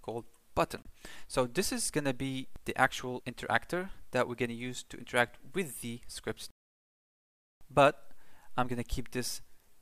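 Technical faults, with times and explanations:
0.82–0.87 s, corrupt frame decoded: a single damaged compressed frame was played as if valid, so misread gains and codes put energy at the wrong frequencies for about 40 ms. It comes through as a faint glitch, peaking at only about -45 dBFS.
6.51–7.61 s, playback stall: the sound stops mid-flow and the output goes silent for about 1.1 s before resuming. The likely cause is the player running short of data or its thread being blocked, leaving nothing to output until it recovered.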